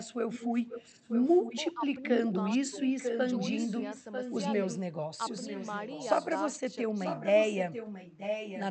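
From 0.11 to 1.6 s, a delayed copy of the speech trails the voice by about 0.94 s. This is echo leak. It sits roughly 10 dB below the speech. The far end likely played the call on a loudspeaker, and its echo canceller passed residue back.

At 1.74 to 1.82 s the voice dips sharply, by roughly 15 dB. This is speech suppressed in double talk. Both sides likely overlapped, and the canceller turned the talker down with the echo. A smaller dip of roughly 5 dB follows at 2.71 to 2.76 s.

The echo leak returns from 2.23 to 4.78 s, again about 0.94 s late. It comes back from 5.28 to 6.45 s, weaker at roughly 15 dB down. It is heard once more from 6.94 to 8.64 s.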